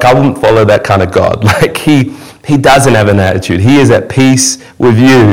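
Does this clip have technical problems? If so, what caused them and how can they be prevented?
Yes. Throughout, a harsh fuzz rides every loud syllable. This is hard clipping: the speech was pushed about 16 dB past the stage's limit, flattening roughly one sample in seven. Lowering the input gain or placing a limiter before the converter keeps peaks under full scale and prevents it.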